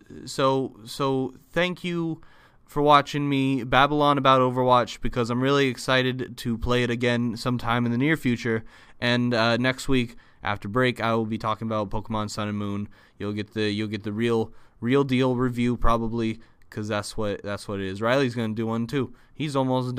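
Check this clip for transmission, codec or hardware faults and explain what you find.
One fault is present: clock slip clicks, from 0.12 s to 19.95 s. Faint ticks recur roughly every fifth of a second, around seventy in all. They likely come from two free-running clocks. Each slip drops or repeats one sample, which fits a clock mismatch near 100 ppm.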